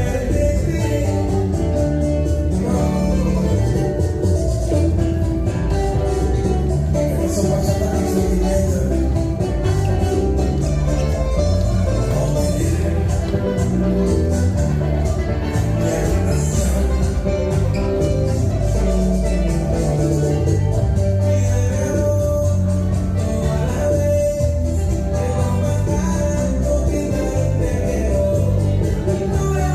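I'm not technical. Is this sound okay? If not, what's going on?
Yes, this sound is okay. Nothing in it points to a technical problem you'd need to worry about.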